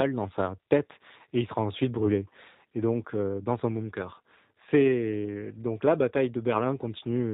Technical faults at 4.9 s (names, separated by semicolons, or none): G.729 codec; VoIP packet loss concealed by the speech codec